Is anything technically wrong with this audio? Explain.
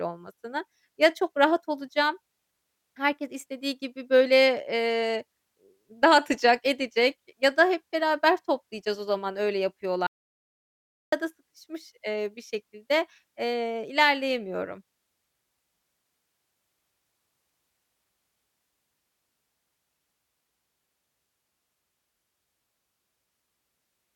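Yes. The speech has an audio dropout to silence from 10.07 s to 11.12 s, just after "toplayacağız o zaman öyle", and it resumes mid-flow at "sıkışmış eee bir şekilde". For about 1.06 s the signal falls to silence, likely because the input link or device briefly failed while recording continued. Unlike a natural pause or a noise gate, the gap carries no room tone at all, and its abrupt edges cut speech off rather than letting it end.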